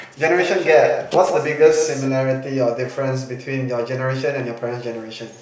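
From 0.38 s to 2.08 s there's a doubled audio track: a second, dry copy of the speech trails around 150 ms behind, roughly 10 dB down, cutting in and out abruptly. It's likely a slower capture path feeding the same audio in twice.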